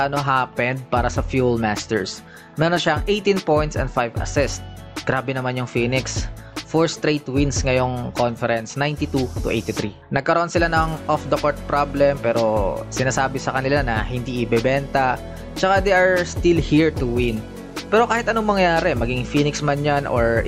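No technical faults are audible.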